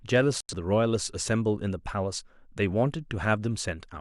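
At 0.41 s the speech cuts out in a digital broadcast dropout. The sound falls quickly to silence. It stays muted until about 0.54 s. The receiver stopped getting clean data, either through signal loss or frames failing their checksum. It muted rather than play corrupt audio. When valid frames returned, sound resumed further into the programme. Whatever was broadcast in that gap is gone. The missing stretch points to a couple of lost frames.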